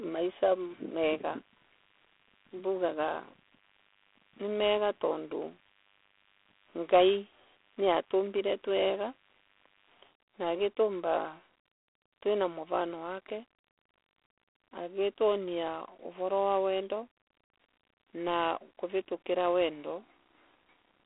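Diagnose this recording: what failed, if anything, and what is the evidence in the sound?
The failure is at the codec stage: the speech has been through G.726 ADPCM coding for its whole length. A harsh, rasping hiss rides on the speech and rises and falls with its level, and the codec damage is plainly audible. That grain fits the 24 kbit/s mode, where only three bits per sample describe the error of an adaptive predictor. The band runs from about 300 Hz to 3.5 kHz, and nothing passes above 3.8 kHz.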